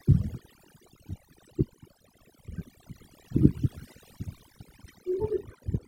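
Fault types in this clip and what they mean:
Overdone noise removal: the background drops and breaks up into twinkling specks, because noise reduction set too hard turns single frequency bands down or off whenever they fall near its noise estimate.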